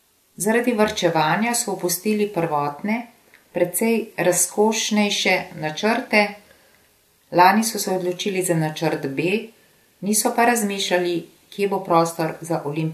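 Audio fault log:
Nothing in the speech stood out as a problem on listening.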